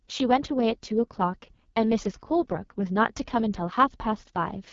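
Speech coded throughout with the AMR wideband (HD Voice) codec, rough and raspy, which fits its lowest 6.6 kbit/s mode; unlike narrowband coding, content reaches 7.4 kHz, with the top band noise-filled.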